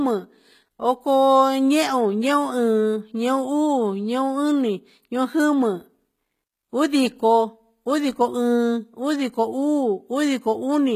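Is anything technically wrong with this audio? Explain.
Yes. Throughout the speech there is plainly audible HE-AAC compression damage, likely from a low-bitrate stream around 20 kbps. The treble is synthesized from copied lower bands rather than coded, so sibilants sound gritty and metallic, and nothing is present above 14.9 kHz.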